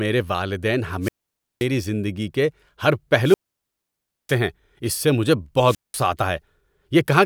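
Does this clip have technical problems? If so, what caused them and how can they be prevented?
Yes. The wireless microphone's radio signal faded until the receiver's squelch muted it. This wireless microphone squelch dropout happens at 1.01–1.67 s, 3.22–4.39 s and 5.63–6.06 s, each time as rising hiss followed by near-silence lasting 0.53 s, 0.95 s and 0.19 s. Keeping the receiver antennas close to the transmitter with a clear line of sight, and choosing an interference-free frequency, prevents it.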